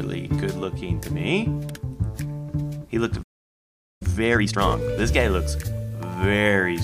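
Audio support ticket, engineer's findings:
Playback stall, 3.22 to 4.02 s. Sound cuts out mid-flow for about 0.78 s, then resumes. Likely player buffer underrun or blocked audio thread; output starved of samples, silence until data returns to the playback queue.

Time-compressed catch-up, 4.02 to 4.78 s. Audio runs at 2.0x speed, pitch unchanged. Player draining its post-stall backlog: short segments removed and cross-faded together until output is back in step.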